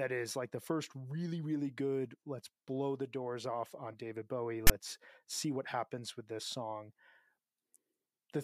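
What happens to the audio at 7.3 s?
Nothing goes wrong at 7.3 s; the speech carries on cleanly through that moment with no dropout, click, distortion or other fault.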